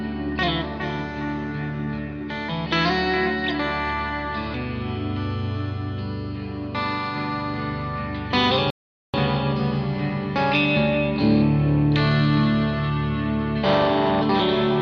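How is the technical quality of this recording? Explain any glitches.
The recording has one clear glitch: a rebuffering stall. At 8.70 s the sound cuts to silence. It picks up again at 9.14 s, exactly where it left off. That adds about 434 ms to the running time. Nothing is skipped or repeated. The player used up the audio it had already downloaded and waited for more data before continuing. The gap is dead silence, and the sound after it lines up seamlessly with the sound before.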